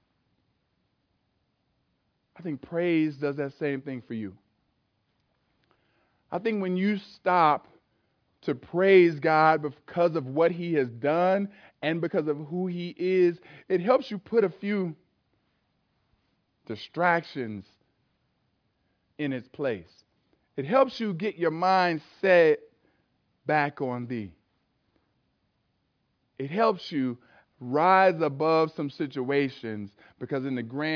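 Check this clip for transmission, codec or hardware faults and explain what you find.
No faults found; the speech holds together throughout, with nothing audible to flag.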